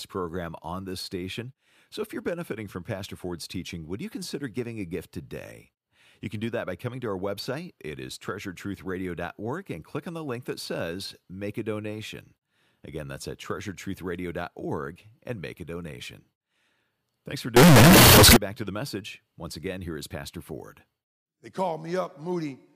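At 17.56 s the speech suddenly blasts into a harsh, squared-off roar until 18.37 s. It's float read as integer: the samples were likely stored as 32-bit float but read as 32-bit integer, so noise jumps to speech level while pitch still comes through.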